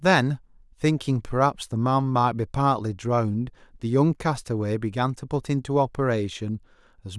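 No technical faults can be heard anywhere in this speech recording. There is nothing to place at any point in its timeline.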